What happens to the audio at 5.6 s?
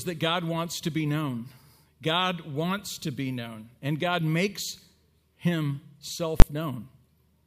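At 5.6 s the speech carries on intact, with no dropout, click, distortion or other fault at that point.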